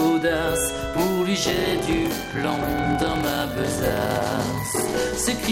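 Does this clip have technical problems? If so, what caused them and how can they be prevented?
Yes. From 1.42 s to 4.96 s there is a block size mismatch (padded). Each block is written short and zero-filled. That leaves a gap in every block, heard as a 43.1 Hz buzz, which fits a 1024-sample read block. The sound runs at 0.861 times normal speed, at about its normal pitch. To prevent it, make every stage write exactly the block size the next stage reads.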